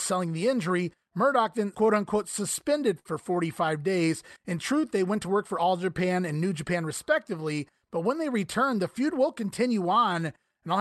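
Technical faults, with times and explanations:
Throughout: clock drift between sender and receiver. The sender's clock runs about 4% slow, so the jitter buffer keeps draining and the receiver has to stretch things to keep up.
0.31–10.59 s: repeated timing corrections. The receiver keeps padding out short pieces, running at 97% speed and adding roughly 0.4 s overall.
2.32–3.06 s: repeated stalls (stutter). The buffer ran dry three times, with 75 ms filled by continuing the last sound and the longest wait 57 ms, so the audio drags and stutters without losing anything.
4.58–5.72 s: scattered short gaps. About three tiny holes, the longest around 15 ms and roughly 30 ms in total, get patched over, leaving brief ticks or smears.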